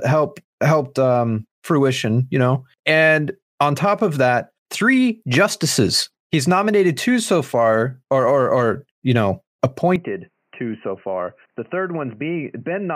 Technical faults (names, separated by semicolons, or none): input switched to a poorer device